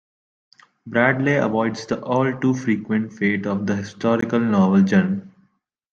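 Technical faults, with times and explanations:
4.21 s, block of digital silence: after "fate of the", the sound cuts out for 15 ms; the waveform shows a flat gap and the spectrogram a vertical blank strip.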